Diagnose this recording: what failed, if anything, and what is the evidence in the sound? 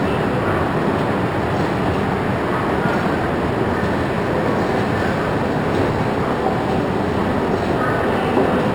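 Imaging from linear upsampling is present for the whole clip. It was introduced at sample-rate conversion, where the audio was raised from a 12 kHz rate to 48 kHz. Straight-line interpolation is a poor low-pass filter, so the top of the original band is dulled. A faint mirror image of the spectrum remains in the 6 kHz to 12 kHz region, around 35 dB below the signal. It is heard as a light metallic shimmer on bright, hissy sounds.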